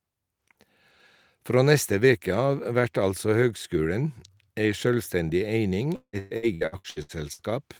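Right after "ei sjølvstendig eining", from 5.95 to 7.42 s, repeated packet loss hits: nine gaps, the longest 175 ms, half the stretch patched by stretching prior sound, so the speech turns choppy and robotic.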